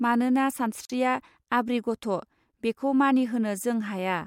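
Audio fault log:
0.85–0.90 s, gap between stream segments: the speech stops dead for about 44 ms and restarts with a hard edge, as two joined segments leave a small hole in their timing that the player fills with silence. Unlike a packet dropout, nothing is missing. The sound resumes exactly where it stopped, and everything after is simply pushed about 44 ms later. A single gap here fits a segment boundary at roughly 4 s segment length.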